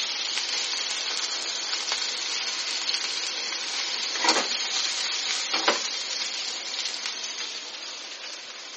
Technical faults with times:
0.00-8.77 MP3 compression

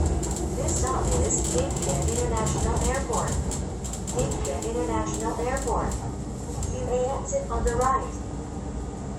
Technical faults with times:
none

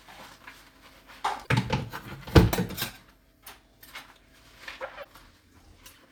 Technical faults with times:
1.43-1.48 damaged data in a compressed stream
5.00-5.06 damaged data in a compressed stream

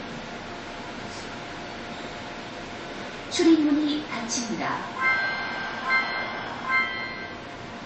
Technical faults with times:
0.00-7.86 MP3 compression

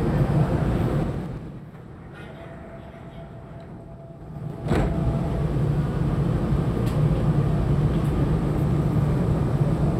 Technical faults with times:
0.98-1.70 zipper noise
4.13-5.06 zipper noise

